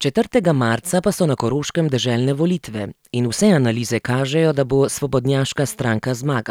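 No technical faults can be heard anywhere in this speech recording. Nothing in it calls for a time mark or points to a problem in how the audio was captured or delivered.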